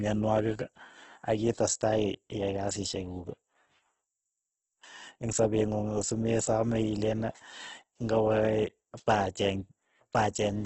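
Across the whole clip the speech carries heavy Opus compression, likely its CELT mode at a low rate near 12 kbps. Bit-starved bands get filled with folded or noise energy, so voiced tones sound grainy and rough, and nothing remains above 8.1 kHz.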